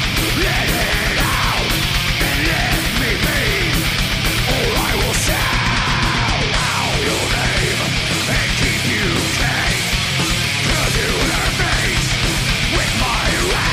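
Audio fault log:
No audible faults detected.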